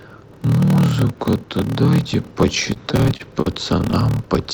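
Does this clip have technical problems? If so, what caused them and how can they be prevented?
Yes. A block size mismatch (padded) runs through the whole speech clip. One stage writes shorter blocks than the next reads, and zeros fill the remainder. That causes a steady buzz near 38.3 Hz. The speech also runs slower, at 0.889 times normal speed, with its timbre unchanged. This fits 1024-sample blocks padded out to a larger read size. To prevent it, match the write and read block sizes, or buffer between the stages.

Repeated stalls (stutter) occur from 2.65 to 3.94 s. Packets arrived late, and the jitter buffer ran dry nine times. Each time, the receiver stretched the last sound to cover the wait. About 143 ms was filled this way, and the longest wait was 39 ms. Nothing is lost, but the speech drags and stutters. To prevent it, deepen the jitter buffer or make the network delivery steadier.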